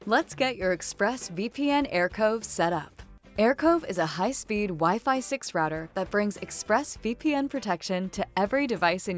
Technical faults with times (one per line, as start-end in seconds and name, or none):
none